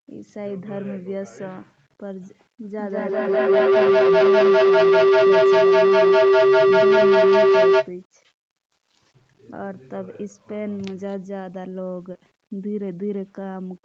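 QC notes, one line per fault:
Throughout: low bit depth without dither. Quiet passages of the speech turn grainy and gritty, with noise roughly 35 dB below the signal, likely from 8-bit rounding without dither.
2.67 to 7.95 s: feedback howl. The call's own audio loops back and swells to a tone near 400 Hz, about 14 dB above the speech, repeating roughly every 200 ms and growing rather than fading.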